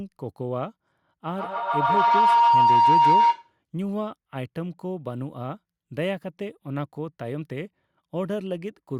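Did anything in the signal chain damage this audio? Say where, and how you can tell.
Yes: feedback howl, 1.36 to 3.59 s, in the call path. A speaker-to-microphone loop gains each trip, building a tone around 1 kHz from repeats roughly every 150 ms that peaks about 10 dB above speech.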